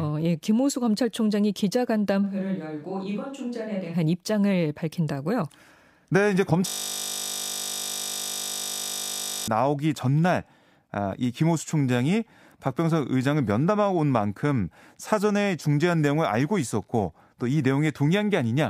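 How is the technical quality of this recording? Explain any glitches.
The recording has two glitches.

From 2.25 to 3.92 s, the close microphone likely dropped out, causing a switch to a distant microphone. The speech turns roomy, hollow and thinner, roughly 5 dB quieter, with faint room noise.

From 6.68 to 9.48 s, a system hang loop occurs. The computer froze while the hardware kept replaying one 20 ms buffer, producing a steady 50 Hz buzz instead of speech.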